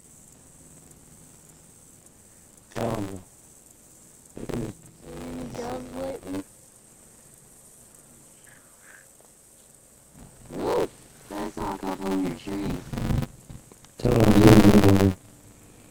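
Buffer tearing runs throughout. The writing program and the playback hardware have slipped so they cross mid-buffer, leaving roughly half of each buffer holding audio from about 40 ms earlier. Hard joins produce a robotic 93.8 Hz buzz, which fits a 512-sample buffer.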